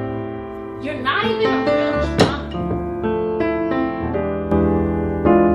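At about 4.52 s there's a sudden gain jump: the level steps up by about 11 dB in one go and stays there to the end. The likely cause is a gain change applied without any ramp, so sound and background noise lift together.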